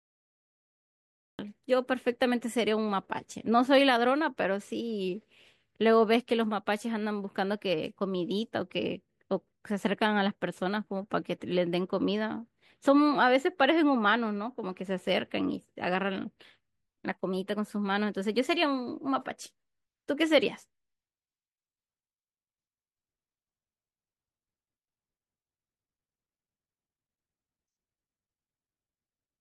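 Speech with a cut-off start: digital silence runs from 0 to 1.39 s, then the audio jumps in mid-sound with no natural attack, because the recording or stream began late.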